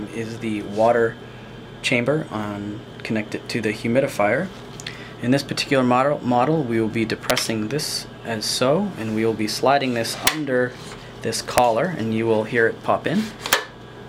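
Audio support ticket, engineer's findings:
Integer overflow, 7.30, 10.27, 11.58, 13.53 s: brief cracks on peaks. Probable fixed-point gain or summing stage wrapping instead of saturating, so peaks past the limit, by about 1, 3, 0 and 3 dB, flip to opposite sign.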